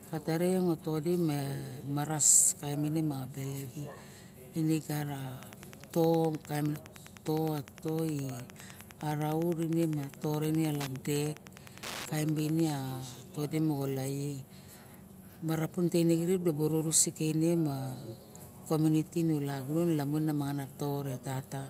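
From 5.35 to 12.72 s there is Wi-Fi interference. The audio circuit rectifies a nearby radio's beacon, sent every 102.4 ms, giving steady ticks about ten times a second, roughly 20 dB under the speech. A mobile-phone buzz would be a harsh continuous drone instead.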